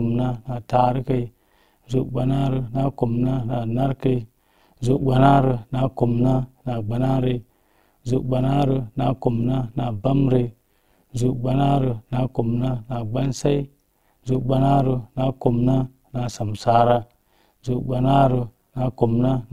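Right from the start and all the way through, the speech has an overlap-add ripple on it. The processing chopped the signal into windowed frames and stitched them back with an overlap whose gains don't add up to a flat total. So the level dips and swells by about 11 dB once per frame, around a hundred times a second. That comes across as a metallic buzz with extra tones riding on everything.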